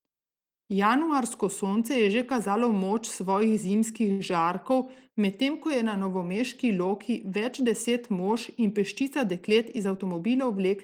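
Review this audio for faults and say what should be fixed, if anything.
Around 4.11 to 4.22 s there is a short stall from a late packet. A packet missed its playout time and the jitter buffer ran dry. The receiver held the last sound for about 82 ms until the packet arrived. Playback then resumed where it stopped, so nothing is lost. The sound is simply drawn out, with a faint buzz or dip. The delay also grew by 82 ms. A deeper jitter buffer, or a steadier network path, would prevent it.

From 9.01 to 10.22 s a jitter buffer speed-up is audible. The buffer had built up more audio than it wanted, so the receiver trimmed small pitch-period chunks again and again. In total roughly a tenth of a second was removed. The speech runs at about 107% of normal pace while the pitch stays the same. It sounds slightly rushed. Letting the buffer shrink more gradually would prevent it.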